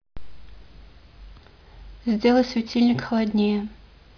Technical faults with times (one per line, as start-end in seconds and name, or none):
none